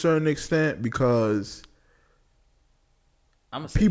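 A speech recording with aliasing running through the whole clip. The audio was brought down from 44.1 kHz to 16 kHz without a proper low-pass first, so content above the new 8 kHz limit folds back below it as unrelated, inharmonic tones. The s and sh sounds come out gritty and metallic. The folded energy is roughly 30 dB below the speech. On a spectrogram, the energy runs hard up to the 8 kHz edge, with mirrored streaks that don't follow the voice's harmonics.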